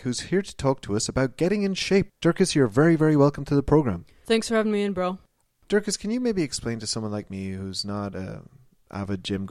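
No technical faults can be heard anywhere in the recording; the speech signal stays continuous and intact throughout.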